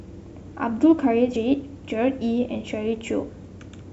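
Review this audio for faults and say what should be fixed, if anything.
At 1.35 s the speech jumps forward by roughly a tenth of a second, heard as a short smeared blip rather than a hard click. This is compressed frames skipped: the decoder dropped around four consecutive frames, either missing from the file or rejected as corrupt, which fits a 26.1 ms frame length. Overlap between neighbouring frames softens the join into a blur. To prevent it, verify file integrity after encoding and transfer, and re-encode from the source if frames are damaged.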